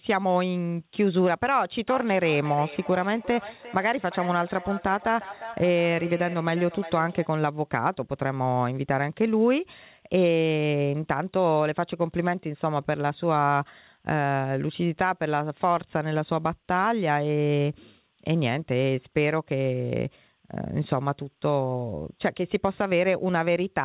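From 1.89 s to 7.37 s there is feedback echo between two devices. A second device plays the call aloud, and the first microphone catches it again. Each phrase comes back roughly every 0.4 s, about 14 dB below the speech, with nothing above 4 kHz.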